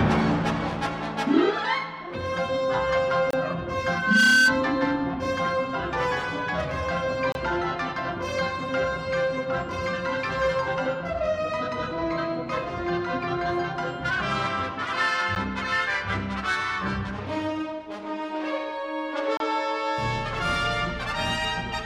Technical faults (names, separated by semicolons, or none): gap between stream segments; loudspeaker feedback squeal